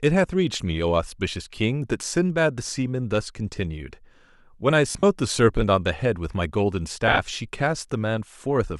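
Lost LE Audio frames at 4.91 to 5.03 s and 7.08 to 7.19 s: the decoder patches short gaps with the last spectrum, briefly smearing the speech into noisy buzz.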